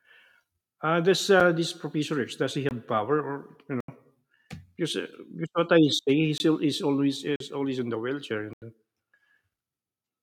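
Speech with six blocks of digital silence, dropping hard to silence and back with no fade: a tick at 1.40 s, short holes at 2.69–2.71, 3.80–3.88, 6.38–6.40, 7.36–7.40 and 8.53–8.62 s. Lengths of 21, 43 and 85 ms fit 1024-sample buffers and multiples at 48 kHz, so unfilled output buffers.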